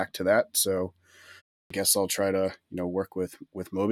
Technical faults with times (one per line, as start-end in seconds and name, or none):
1.63-1.70 clipped start after a pause